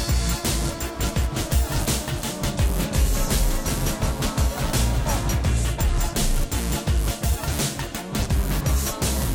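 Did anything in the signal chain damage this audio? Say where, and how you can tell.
Yes, a doubled audio track runs from 1.12 to 5.42 s: the music repeats around 400 ms late, about 5 dB quieter, starting and stopping abruptly. The likely cause is a second, slower capture path or an edit. Spectrograms show a shifted, undecayed full-band duplicate.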